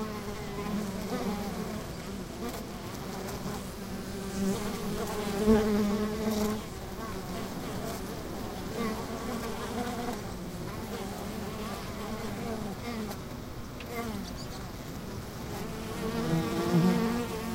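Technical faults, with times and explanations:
Nothing technical trips up this recording; it just sounds the way it should, with no faults to point to anywhere along the way.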